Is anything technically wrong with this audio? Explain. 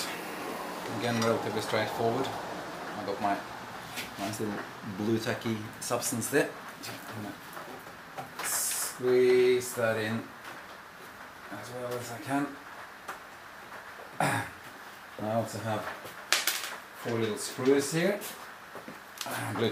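No, nothing technically wrong stood out on listening to this audio.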